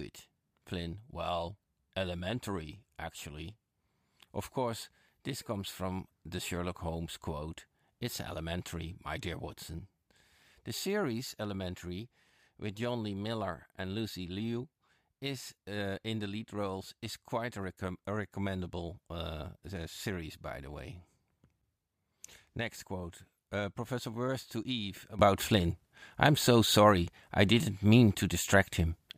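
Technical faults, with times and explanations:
25.19 to 29.18 s, sudden gain jump: speech and background noise rise together by about 12 dB between adjacent samples and stay louder to the end, likely a gain change applied without a ramp. The waveform envelope steps wider; the spectrogram brightens across all bands at once.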